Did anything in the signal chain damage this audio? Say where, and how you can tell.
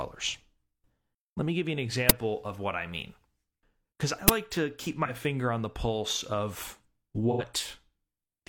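Yes. The playback buffer failed twice. Short, loud bursts of digital noise hit at 2.09 s and 4.28 s, the second just before "to keep". Each lasts about 11 ms, which fits a 512-sample buffer. This is an uninitialised buffer: leftover memory was played as samples.

The codec dropped data too. There is AAC frame loss with concealment at 5.05 s, for about 43 ms, between "to keep" and "finger on the pulse". It recurs at 7.31 s, for about 85 ms, after "on the pulse of". The decoder filled each gap from the last good spectrum. That leaves smeared, noisy patches consistent with one and then two lost frames.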